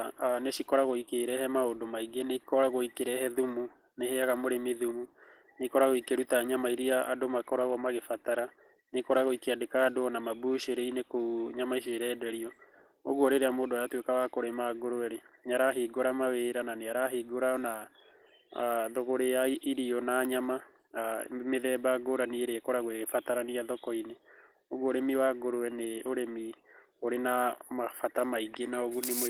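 A speech clip with Opus voice compression damage throughout. The artefacts are plainly audible. The voice sounds hoarse and slightly robotic, because the excitation is coded coarsely. The band is not narrowed. The highs are still present, which points to fullband hybrid mode, with SILK coding the lower band and a CELT layer above 8 kHz. The overall quality fits a low bitrate of around 16 kbps with 20 ms frames.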